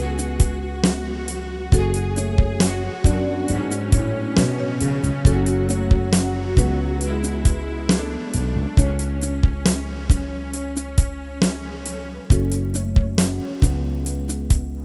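From 12.05 s to the end, the sound carries a resampler restarted on every block. Each 50 ms block is converted from 24 kHz to 48 kHz in isolation, so the edges lack neighbouring samples and leave small errors that tick at 20 Hz. A spectrogram shows thin vertical lines every 50 ms, and the waveform shows tiny steps at each block boundary.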